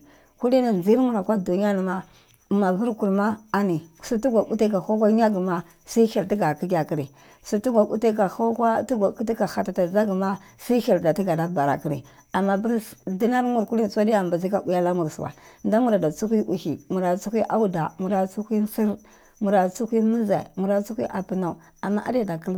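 A spoken-word recording with nothing technically wrong to point to anywhere along its length.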